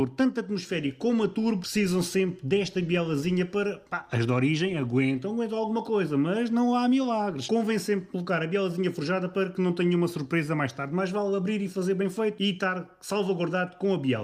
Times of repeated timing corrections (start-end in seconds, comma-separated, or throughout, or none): 0.02-14.06